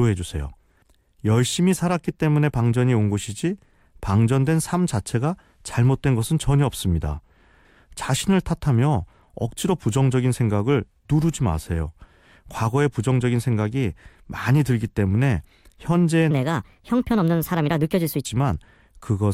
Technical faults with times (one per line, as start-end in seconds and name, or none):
16.31-18.25 section at the wrong speed